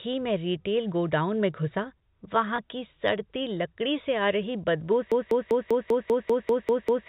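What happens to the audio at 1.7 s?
At 1.7 s the speech is intact, with nothing wrong at that moment beyond the narrow, sub-4 kHz character of the G.711 telephone coding that runs through the line.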